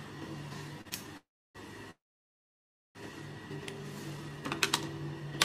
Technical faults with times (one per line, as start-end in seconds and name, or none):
0.81-0.93 short stall from a late packet
1.17-1.57 call audio freeze
1.91-2.97 call audio freeze
4.17-4.42 jitter buffer slow-down